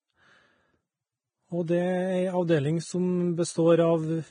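Vorbis compression runs through the whole of this speech recording, and it is heavy. Nothing is present above about 9.7 kHz, and the remaining treble is hissy and grainy, with roughened tones and smeared consonant onsets. The likely cause is a low-quality Vorbis encode, consistent with a bitrate of roughly 21 kbps. At that rate the encoder drops the top band and quantises the upper residue so coarsely that fine detail is replaced by noise of similar energy.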